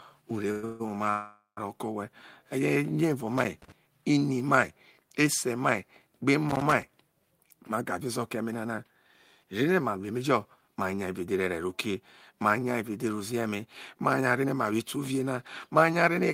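Call audio freezes come first, at 0.51 to 0.65 s, 0.65 to 0.82 s and 1.10 to 1.59 s. Late packets likely emptied the jitter buffer. The last sound stretches into a fading buzz, with 140 ms of silence in the third. Nothing is lost, only delayed.

Loose connector crackle follows at 3.38 to 3.72 s, just before "ini mai ese mai", and again at 6.49 to 6.83 s. A failing contact chops the signal into rough, scratchy bursts.

Jitter buffer speed-up runs at 7.31 to 8.92 s (107%), 9.44 to 10.18 s (109%) and 10.61 to 16.20 s (109%). Tiny pitch-period slices are cut, roughly 150 ms, 70 ms and half a second. The speech sounds hurried at unchanged pitch.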